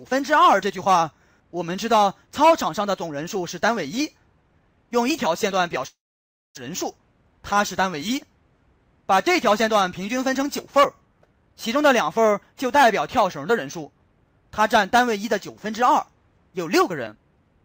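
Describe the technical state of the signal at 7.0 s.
The sound hurries, running 8% fast at unchanged pitch from 6.69 to 7.33 s. This is a jitter buffer speed-up, which cuts pitch-period slices totalling roughly 50 ms to shed backlog.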